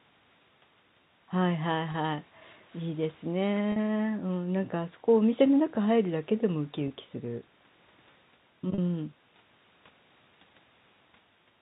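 Brief held, buzzy stretches at 1.92–1.94, 3.72–3.76, 6.88–6.90 and 8.74–8.78 s are packet loss with pitch repetition: gaps of 20 or 40 ms, bridged by repeating the last pitch period, over telephone-band G.711 coding.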